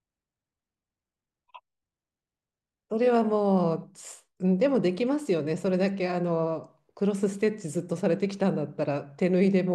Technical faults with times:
none

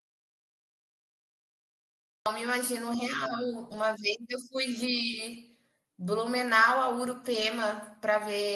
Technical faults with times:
0.00-2.26 audio dropout to silence
3.69-3.83 lost packet rebuilt from error correction
5.33-5.35 lost packet rebuilt from error correction
7.31-7.49 lost packet rebuilt from error correction

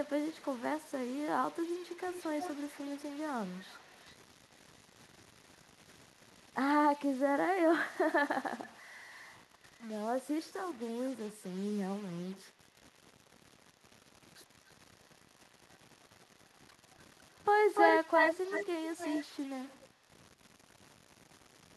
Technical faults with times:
0.00-21.76 stuck bit
0.04-0.95 echo leak
1.51-6.54 echo leak
9.39-9.88 echo leak
12.36-12.97 echo leak
14.13-19.24 echo leak
19.79-20.18 echo leak

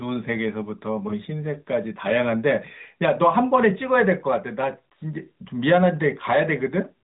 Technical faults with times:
none

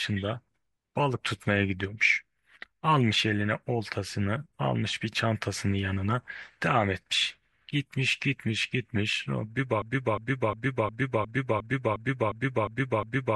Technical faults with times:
9.82-13.35 broken-record loop

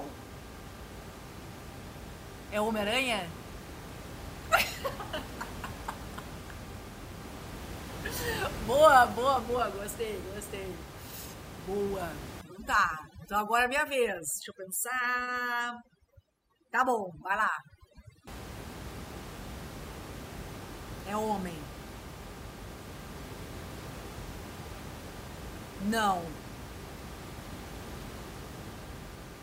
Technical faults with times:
12.41-18.27 overdone noise removal

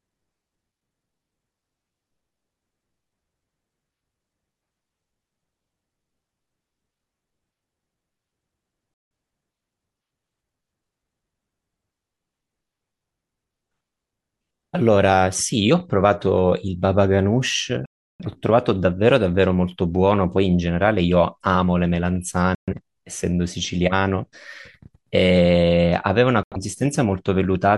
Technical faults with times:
8.94-9.11 digital broadcast dropout
17.86-18.25 digital broadcast dropout
22.55-22.73 digital broadcast dropout
26.43-26.57 digital broadcast dropout

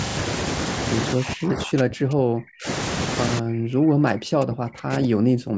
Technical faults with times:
1.14-2.67 speech suppressed in double talk
3.40-5.58 speech suppressed in double talk

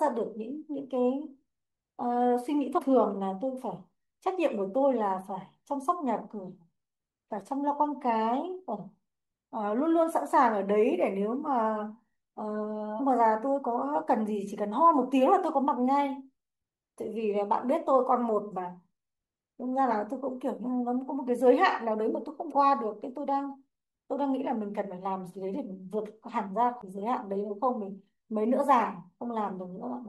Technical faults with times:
2.77-2.79 damaged data in a compressed stream
12.99 damaged data in a compressed stream
19.90 damaged data in a compressed stream
22.51 damaged data in a compressed stream
26.81 damaged data in a compressed stream

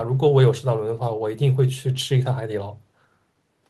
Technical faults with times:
none

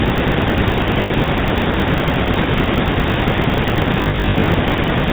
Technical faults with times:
0.00-5.12 GSM full-rate codec
0.00-5.12 filter restarted on every block
1.02-1.11 lost GSM frames
4.02-4.48 lost GSM frames

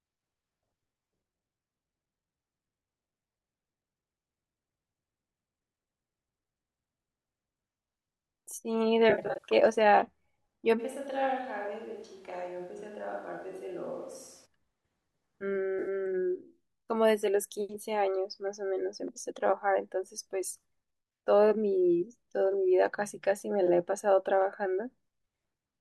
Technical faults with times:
9.10-9.53 AAC frame loss with concealment
10.81-14.45 switch to a distant microphone
15.79-15.88 AAC frame loss with concealment

